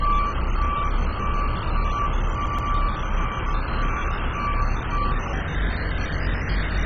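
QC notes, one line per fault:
throughout MP2 compression: Dull, gurgling, grainy sound with nothing above 7.5 kHz. Heavy sub-band quantisation likely from MP2 at a very low rate, around 16 kbps.
2.46–2.71 s CD stuck on one turn: A 0.125 s slice plays twice more, with a brief mute at each jump. It gives a quick, even skipping-disc stutter.
5.33 s to end section at the wrong speed: Audio runs 1.37 times fast, so pitch rises about five semitones. It is likely a playback clock mismatch.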